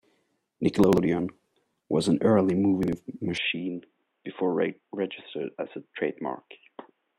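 At 0.84 s the audio jumbles until 0.98 s. Chunks are out of order here. One block of sound, about 46 ms long, plays two blocks later than it should. Nothing is missing, but the sequence is wrong. Three hard joins give a short garbled moment. It happens again at 2.83 s, right after "was an early", lasting to 2.93 s. This time the block is one position late. The same brief scramble is heard.

From 3.38 s to the end, the sound turns dull and boxy. There is no gap at the change. Nothing is present above 3.8 kHz. The level drops by about 5 dB. A faint new background noise appears, about 50 dB below the speech. The likely cause is that the input switched to a poorer device, such as another microphone or a headset call profile.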